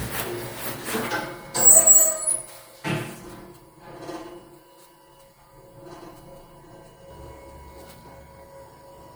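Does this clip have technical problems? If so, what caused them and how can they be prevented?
Yes, two things stand out. From 1.08 to 7.1 s there's channel delay (comb filtering): one channel lags the other by around 5 ms, and summing to mono cancels shared content at evenly spaced frequencies starting near 100 Hz, so the sound goes hollow and phasey. Check channel alignment before any mono fold-down.

At 2.52 s there's a repeated frame: one 26.1 ms block plays twice, which fits an MP3-style 1152-sample frame at 44.1 kHz. That gives a brief stutter and adds 26.1 ms to the audio. Verify the encode/transfer chain isn't resending or rewriting frames.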